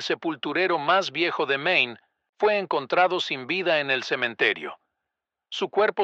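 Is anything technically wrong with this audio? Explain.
No, the speech signal shows no technical faults anywhere in the recording.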